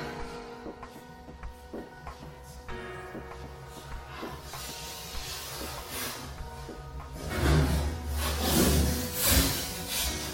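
From start to finish there is a block size mismatch (truncated). Each block's tail is discarded, causing a steady 91.9 Hz buzz with no noticeable speed change. A spectrogram shows vertical splice lines every 10.9 ms; the waveform shows matching small jumps.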